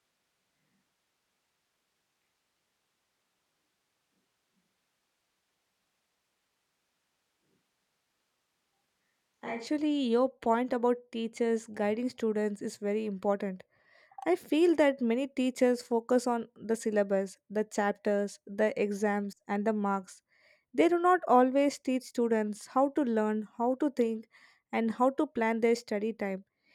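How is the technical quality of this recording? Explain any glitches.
The speech has one glitch. From the start to 9.67 s, just before "your point about teachers", there is a switch to a distant microphone. The close microphone likely dropped out. The sound is hollow, roomy and thin in the bass, with room noise about 25 dB below the speech.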